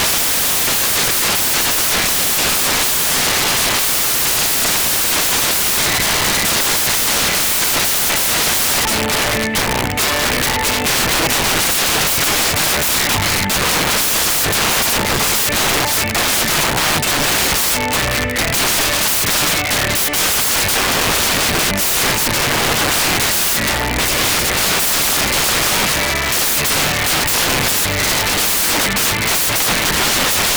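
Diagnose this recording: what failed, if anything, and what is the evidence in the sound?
The failure is at the sample-format conversion stage: samples built from the wrong bytes. From start to finish the sound is replaced by loud, harsh broadband noise. The reader misassembles each sample's bytes, so rapidly changing low bits dominate every value.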